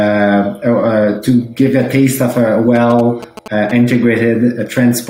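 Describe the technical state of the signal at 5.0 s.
Around 5.0 s the signal is intact, with no audible fault at that moment.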